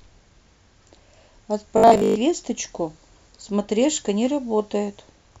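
From 1.8 to 2.2 s, robotic sound from repeated short buffers: a rigid 50 Hz metallic buzz, likely 20 ms chunks looped instead of new audio. It differs from dropouts because the sound never goes silent.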